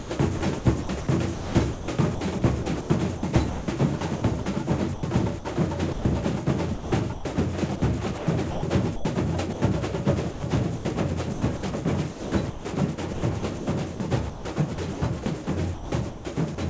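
Sound chopped by the voice detector runs from 0 to 6.05 s, 6.74 to 7.25 s, 7.76 to 9.62 s and 10.31 to 16.58 s. The likely cause is a sender-side voice detector gating transmission on and off, with standard comfort noise filling the gaps: roughly 1.5 s, 0.3 s, 0.45 s and 1.7 s of sound in those stretches. Soft onsets and tails drop out, so the audio turns choppy. The band tops out at 8 kHz, consistent with a 64 kbps G.722 call path.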